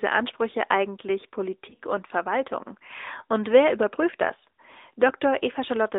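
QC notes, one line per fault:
Throughout: AMR narrowband mobile codec. The sound is confined to roughly 300 Hz to 3.7 kHz, with nothing above. Speech is rebuilt from a vocal-tract model fed sparse pulses, so it has a plainly buzzy, synthetic edge, which fits the 10.2 kbps mode.
1.70 to 1.75 s: lost AMR speech frames. About 20 ms of speech went missing, which points to a single failed frame. The decoder filled the gap by repeating the last good pitch and vocal-tract settings at reduced gain, giving a brief dip and warble before normal decoding resumes.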